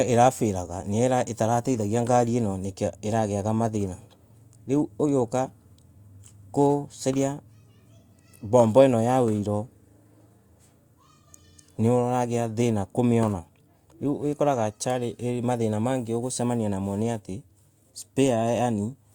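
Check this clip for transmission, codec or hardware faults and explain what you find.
I found no faults in the clip.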